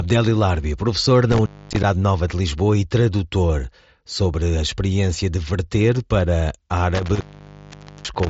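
Intermittent contact at 1.32 to 1.84 s and from 6.95 s to the end, after "experiência de verter para": a loose connection briefly opens, dropping the speech for about 0.25 s and then 0.85 s, with crackle at each edge and faint hiss underneath, over mSBC's band-limited sound topping out near 7.7 kHz.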